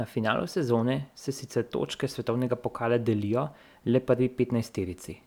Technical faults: none

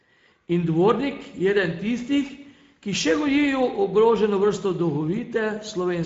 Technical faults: Speex codec

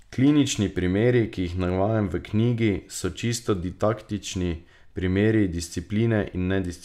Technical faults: none

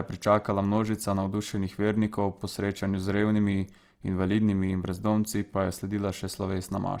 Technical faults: Opus compression

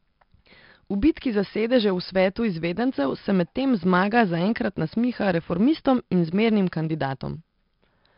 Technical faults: 4-bit ADPCM compression

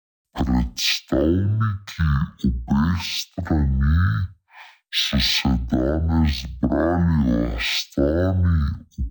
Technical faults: stereo read as mono

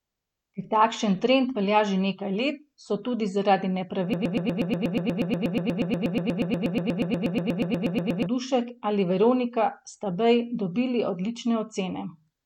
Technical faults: broken-record loop

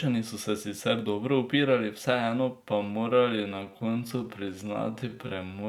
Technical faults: time-stretched section

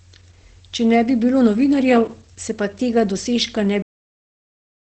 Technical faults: Opus compression; cut-off end

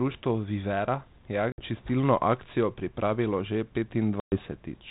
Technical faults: packet loss on an ADPCM call

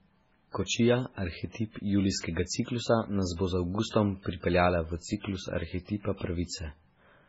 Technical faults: MP3 compression

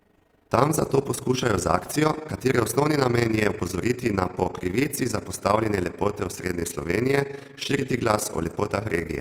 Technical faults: overlap-add ripple

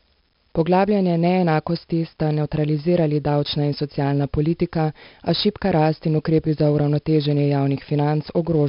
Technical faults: 4-bit ADPCM compression

